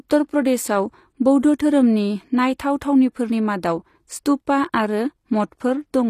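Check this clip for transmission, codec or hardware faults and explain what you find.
One fault runs through the whole speech clip. The treble has a gritty, metallic edge, and s sounds come out lispy. Nothing is present above 14.9 kHz. The likely cause is HE-AAC compression at a low bitrate, around 24 kbps. Only the lower spectrum is coded, and the treble is rebuilt from copied lower bands. Its harmonics do not line up with the real ones.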